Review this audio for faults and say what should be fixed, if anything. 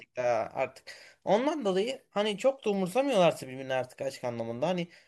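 Nothing stood out on listening to this speech recording, so there is nothing here that needs fixing.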